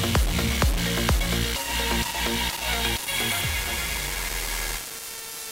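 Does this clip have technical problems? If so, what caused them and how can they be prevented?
Yes. Harsh grainy distortion that tracks the signal runs throughout, nearly as loud as the sound itself. The likely cause is low bit depth without dither: about 4 bits, plain rounding. To prevent it, keep full resolution and add dither whenever bit depth is reduced.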